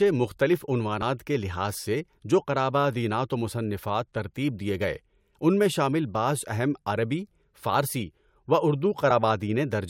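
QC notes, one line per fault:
1.01 s and 9.10 s, compressed frames skipped: a short jump where the speech lurches forward, losing about 40 ms at 1.01 s and 20 ms at 9.10 s. Whole frames of roughly 21 ms were dropped.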